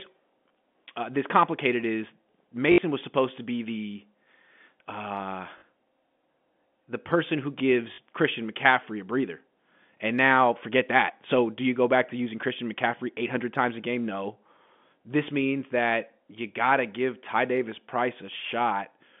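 Speech over a telephone-band line shows packet loss with the last packet repeated at 2.72 to 2.78 s (after "uh this complicated is"), 5.58 to 5.62 s and 7.94 to 7.98 s (after "the person who"). Each 40 to 60 ms stretch gives a buzzy stutter, which fits 20 ms packets replayed, rather than the silent hole that a zero-filled gap would leave.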